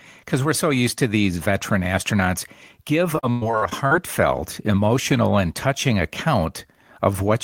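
Repeated packet loss from 3.15 to 3.93 s, after "these veteran astronauts give", left holes filled by stretching earlier sound, so the speech turns choppy and robotic.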